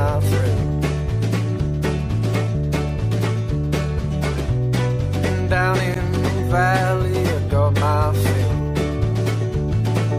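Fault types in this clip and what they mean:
Damaged data in a compressed stream: at 9.71 to 9.73 s, corrupted bytes make the decoder misread frames and resync, producing a brief glitch.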